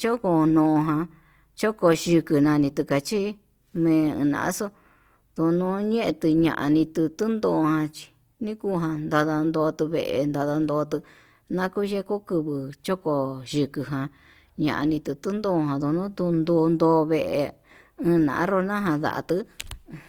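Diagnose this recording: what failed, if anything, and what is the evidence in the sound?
Codec stage: throughout, the speech sounds grainy and rough, likely Opus compression at a rate near 24 kbps. The spectrogram shows noise-filled bands, with few holes, up to 20.3 kHz.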